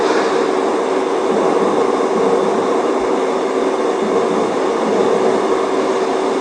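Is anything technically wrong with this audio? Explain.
No, the recording carries no audible technical faults, and the signal stays intact and stable throughout.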